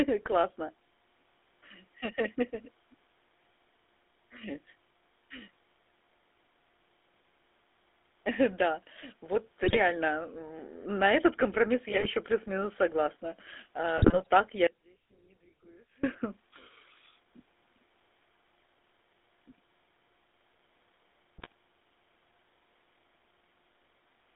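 The speech carries GSM full-rate codec damage throughout. The band sits at 250 Hz to 3.6 kHz. Pulse-driven vocal-tract modelling leaves a buzzy, gravelly roughness.

GSM bit errors strike at 9.63 to 9.77 s, 11.88 to 12.06 s, and 13.98 to 14.27 s. Corrupted decoder values erupt as squawks, pops and gargling.

From 14.67 to 16.03 s comes an audio dropout to a faint residue. The sound cuts abruptly for 1.37 s, leaving only a trace about 30 dB down. The likely cause is a lost signal on a path that stayed live.

A further burst of GSM bit errors hits at 21.38 to 21.52 s.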